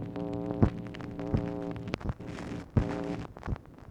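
Nothing in the audio stood out as a technical problem on listening.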